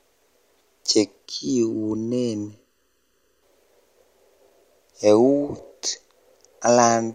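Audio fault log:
1.26–3.43 s: channel delay (comb filtering). One channel lags by under a millisecond and the mono sum cancels at evenly spaced frequencies, the first near 700 Hz, so the speech turns hollow and phasey. A spectrogram shows fixed horizontal notch bands for that stretch.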